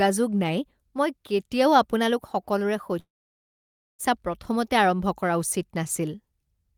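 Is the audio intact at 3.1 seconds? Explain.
No. A long network dropout runs from 2.99 to 4.01 s, likely because no audio arrived for about 1.0 s. The receiver stretches the last sound into a brief fading buzz or hiss, then about 0.92 s of silence follows before speech resumes with that stretch lost.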